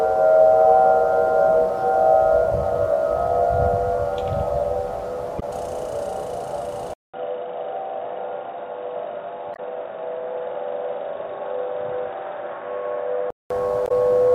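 At 5.37 s a brief glitch lasting about 60 ms breaks the sound. This is damaged data in a compressed stream: the decoder hit corrupted frames, lost sync and jumped to the next frame header.

At 6.94 s the sound drops out for 200 ms, then returns dull and boxy with nothing above 3.8 kHz, at much the same level and over a faint new noise floor. The full band returns at 13.50 s. The likely cause is the input switching to a poorer device, such as a headset's narrowband call profile.

The same corruption recurs as short glitches at 9.52 s (about 75 ms) and 13.85 s (about 60 ms).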